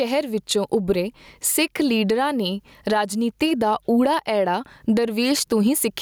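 Gain pumping runs throughout this speech clip, with the gain swinging by roughly 15 dB, likely because the input gain was set far too high and a fast limiter keeps clamping it, squashing the dynamics.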